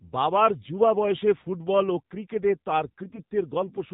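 The whole clip runs through the AMR narrowband mobile codec at what sounds like 7.4 kbps. Everything above 4 kHz is gone, and the voice has that plainly audible buzzy, synthetic edge from a vocal-tract model driven by only a few pulses per frame.

Then, right after "ফুটবল ও ক্রিকেটে তাঁর", from 3.01 to 3.23 s, you get AMR bit errors. Around a couple of percent of the weakly protected bits got flipped, so the excitation pulses and fine parameters go wrong and the voice turns hoarse and gargly while keeping roughly its pitch and level.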